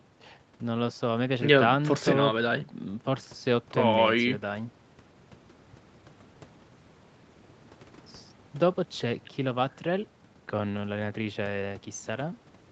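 No technical faults can be heard in this speech recording.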